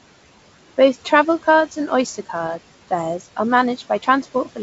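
The room noise behind this speech sinks between phrases and swells back under them. These are noise suppressor artifacts: the processor turns down each band it judges to be steady noise, frame by frame, cutting the background by about 17 dB. The room noise itself sits about 19 dB below the speech, and the audio reaches up to about 7.7 kHz, as G.722 wideband telephone coding would at 64 kbit/s. From 4.02 to 4.58 s, just after "card fares are", parts of the speech turn faint and swallowed, dipping by up to about 10 dB over roughly 150 ms in total. This is speech cut by the noise suppressor, which mistook those quieter stretches for background noise and lowered them along with it.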